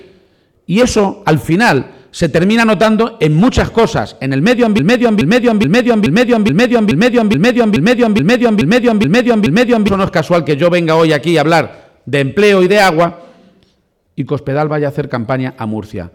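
A broken-record loop runs from 4.79 to 9.88 s: a 425 ms fragment repeats exactly, back to back, twelve times, likely from a stalled player resending its last buffer, so the intervening audio is lost.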